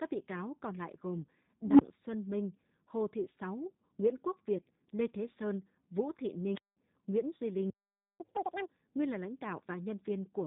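Throughout, the speech carries plainly audible G.729 codec damage. It has a rough, slightly synthetic edge from being rebuilt by a low-rate model at 8 kbit/s. A spectrogram shows a hard ceiling with nothing above 3.8 kHz, and smeared, buzzy harmonics below it.

From 7.70 to 8.20 s a playback stall cuts the speech off mid-flow for half a second. The player likely ran out of data or was blocked. The waveform flattens to silence there, and the spectrogram shows a clean vertical gap across all frequencies.

From 8.20 to 8.70 s comes catch-up at higher speed. The backlog is resampled to play at 2.0 times normal speed, so the sound rushes and its pitch jumps by roughly ten semitones. It drops back to normal for "nguyên là lãnh". On the spectrogram, the harmonics sit higher and are squeezed in time.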